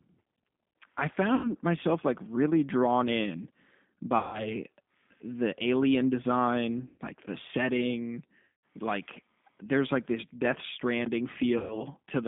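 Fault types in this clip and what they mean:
G.729 codec: A low-rate speech coder that rebuilds the voice from a vocal tract filter, a pitch predictor and sparse pulses. Here the speech sounds plainly rough and synthetic throughout. A spectrogram shows energy held between 150 Hz and 3.6 kHz, with nothing above.
VoIP packet loss concealed by the speech codec: Five times, 90 to 180 ms of lost audio is filled in by the decoder, which extends its last pitch and filter. Each gap sounds like a buzzy tone or coloured noise that fades. The waveform shows repeating cycles shrinking in amplitude, and the spectrogram shows smeared, flat harmonics.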